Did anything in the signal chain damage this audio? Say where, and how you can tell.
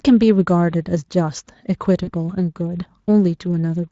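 Yes. VoIP packet loss concealed by the speech codec occurs at 2.03 to 2.11 s, a network-stage fault. About 40 ms went missing, which fits two lost frames. The Speex decoder extended its last pitch and filter into a fading buzzy tone or coloured noise, and the speech stays weak for tens of milliseconds or more after about 2.11 s.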